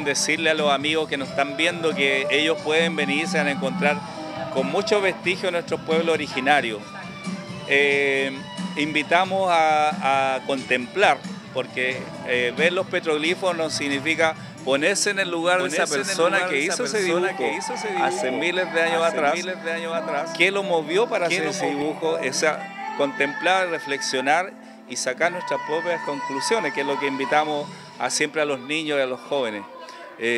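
From 15.6 s to 21.8 s a doubled audio track appears: a second copy of the same sound runs about a second behind, a few dB quieter, likely from a slower capture path or misaligned edit. It cuts in and out abruptly, and spectrograms show every event repeated, time-shifted.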